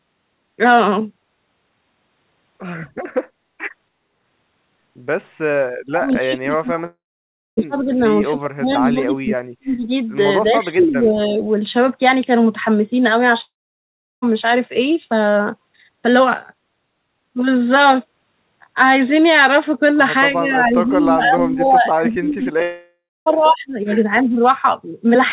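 Speech suppressed in double talk from 5.81 to 7.98 s: the talker dips by as much as roughly 35 dB across about two seconds, likely because the echo canceller could not tell the near voice from loudspeaker echo while both sides spoke, so it turned everything down.

Long network dropout from 6.86 to 7.59 s, inside that dip: about 720 ms of audio is missing, likely lost in transit. The receiver stretches the last sound into a fading buzz, and roughly 600 ms of that is near silence before the sound resumes further along.

Speech suppressed in double talk again from 8.32 to 9.89 s, with the deepest cut around 40 dB over about a second and a half, and from 10.57 to 11.44 s, a shallower dip of roughly 15 dB.

Echo leak at 10.81 to 10.87 s, inside that last dip: a brief, faint copy of the voice returns about 288 ms late, roughly 20 dB below the speech. This likely happened because the far side's echo canceller let part of its loudspeaker pickup through.

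Long network dropout from 13.41 to 14.24 s: about 820 ms is lost, likely in transit, and a fading fill runs into about 720 ms of near silence.

Speech suppressed in double talk from 20.32 to 23.77 s pulls the level down by up to roughly 20 dB over about three seconds. Within it, a long network dropout from 22.62 to 23.28 s removes about 640 ms, likely in transit, with roughly a quarter second of that near silent.

A last, very short double-talk dip of about 15 dB comes at 24.23 to 24.38 s.

Throughout, nothing sounds above 4 kHz, which points to a 64 kbps G.711 mu-law call path.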